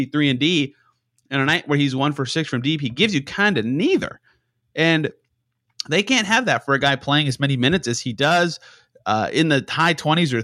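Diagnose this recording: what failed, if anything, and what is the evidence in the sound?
Nothing failed; no stage in the chain shows audible trouble.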